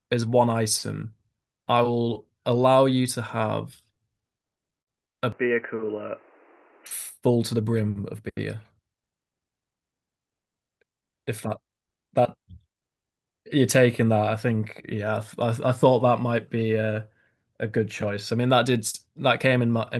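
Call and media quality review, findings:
Stutter, 3.85–4.89 s: speech drags and catches in nine short stalls, longest 57 ms, 140 ms filled by repeating prior sound; jitter buffer repeatedly ran dry, nothing lost.

Dull, band-limited speech, 5.32–6.86 s: level down about 5 dB, new noise about 30 dB under the speech; likely input switched to a poorer device.

Hurried speech, 7.89–8.21 s: runs at 109% speed with pitch unchanged; jitter buffer speed-up trimming about 40 ms in pitch-period slices to cut excess delay.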